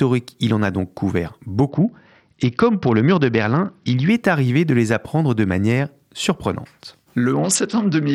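French speech with two stretches of Bluetooth SBC bit pool drop, 1.69 to 4.09 s (ending before "est arrivé de les") and 7.33 s to the end after "apprendre de manière surprenante". The treble dulls and gritty noise rises, which fits the bit pool falling from 31 to 8, around 66 kbps, on a congested link.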